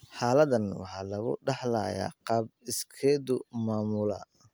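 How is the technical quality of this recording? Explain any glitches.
No technical faults can be heard anywhere in the speech recording.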